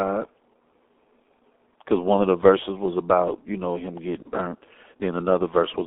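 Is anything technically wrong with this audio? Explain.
Yes, there are two faults. Throughout, the speech carries heavy G.723.1 codec damage. It sounds muffled and hoarse, with smeared consonants, which fits a low-rate codec near 6 kbit/s. A spectrogram shows energy confined to about 250 Hz to 3.6 kHz, with coarse, blocky detail.

From 4.22 to 4.28 s there is VoIP packet loss concealed by the speech codec. About 30 ms of audio went missing, and the decoder repeated its last pitch and filter at falling gain. This produces a brief buzzy tone or coloured noise that fades. On the waveform it shows as a decaying stretch.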